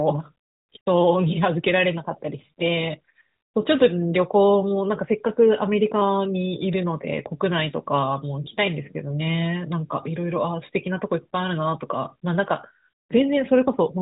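Nothing stood out on listening, apart from the narrow bandwidth of the AMR narrowband mobile codec, which leaves nothing above 3.8 kHz.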